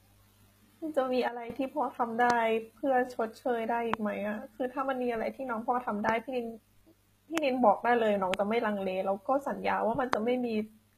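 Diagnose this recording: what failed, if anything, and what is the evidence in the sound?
The codec stage shows plainly audible damage throughout, likely from HE-AAC at a bitrate around 20 kbps. Nothing remains above 14.9 kHz, and the treble below that is rebuilt from copied lower bands, so its harmonics don't line up and s sounds turn gritty or lispy.

A sudden gain jump occurs at 1.28 s: speech and background noise drop together by about 12 dB, then return at 1.5 s. The one-sample step without a ramp points to a digital gain setting or bit shift, likely in the driver or processing chain.

Six loud pops, each a single sharp pulse well above the speech, land at 2.30, 3.94, 6.09, 7.38, 8.34 and 10.13 s, with speech continuing underneath. They are likely voltage steps from analogue wiring, a switch, static or a driver glitch, shaped by downstream circuits.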